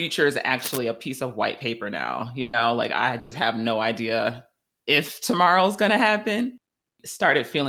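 It's a speech clip with two kinds of trouble. From 0.59 to 0.79 s there's a patch of cable scratch noise: a dense, uneven scratchy rustle sitting around 10 dB below the speech. That sound is what you get when contact resistance jumps about in a worn cable, connector or pot as it's moved, so that's the likely cause here. Then there are two bursts of packet loss, at 2.41 to 2.56 s and again at 3.19 to 3.34 s. Each time, the receiver had nothing to play for roughly 120 ms and filled the hole by stretching the last bit of audio and fading it down. You hear a brief held buzz or fading hiss instead of a dropout to silence. When the audio picks back up, it has jumped ahead, and about 120 ms of the speech is simply gone in each case.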